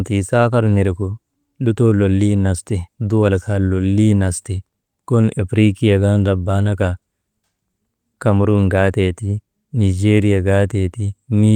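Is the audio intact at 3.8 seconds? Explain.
Yes, the audio at 3.8 seconds is intact, with no dropout, click, distortion or other fault audible at that moment.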